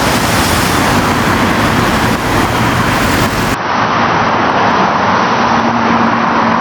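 Input gain set far too high, with a fast limiter clamping it on every loud sound, is the likely cause of the gain pumping heard throughout. The level swings by roughly 10 dB, leaving the sound squashed.

At 3.54 s the system likely switched its input to a poorer device, with no gap at the change. From then to the end nothing passes above 6.1 kHz, so the sound turns dull and boxy. It also drops by roughly 10 dB and gains a new noise floor about 40 dB below it.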